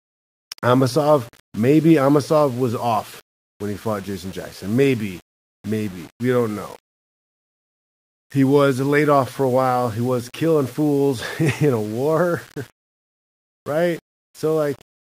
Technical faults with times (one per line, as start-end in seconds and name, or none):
0.00-15.06 low bit depth without dither